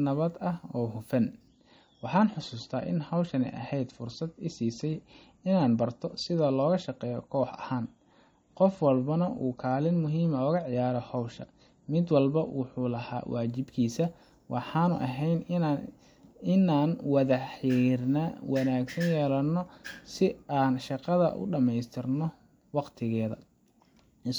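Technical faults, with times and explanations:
1.48 to 13.48 s, adaptive stream at a lower bitrate: Just after "nabad ah oo hufan", the speech abruptly loses its treble, with no gap. Nothing is left above about 8.3 kHz. Sibilants turn dull, and codec artefacts grow more audible. The player has switched to a cheaper version of the stream, which fits a drop from around 128 to 32 kbit/s MP3. At 13.48 s the full bandwidth returns just as suddenly.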